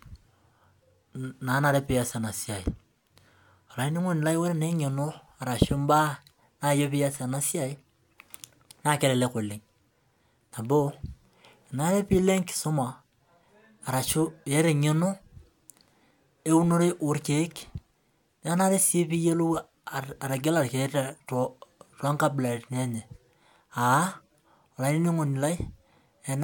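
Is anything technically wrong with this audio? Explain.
No, the signal shows no technical faults.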